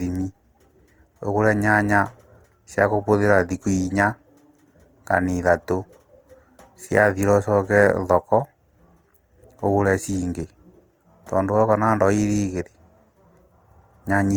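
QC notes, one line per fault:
Throughout, Opus compression, likely: the speech is plainly rough and grainy, with a noisy fizz up top rather than swirly holes, because starved bands get filled with folded or noise content. Bandwidth still reaches 20.2 kHz, which fits music mode at around 24 kbps.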